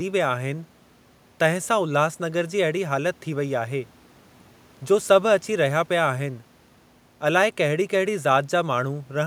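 Nothing goes wrong in this speech recording at all, with just a faint bit of room noise sitting about 34 dB below the talking, and that hush belongs to the space where the microphone was.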